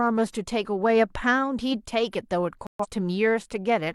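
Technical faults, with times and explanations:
2.67 to 2.86 s, digital broadcast dropout: the speech cuts abruptly to silence for about a fifth of a second and then resumes partway on, with nothing of the intervening programme heard. The receiver stopped getting decodable data, either losing the signal or rejecting corrupted frames, so it muted its output until clean frames arrived again. The missing stretch fits roughly three lost frames, around 128 ms of transmitted audio that was never recovered.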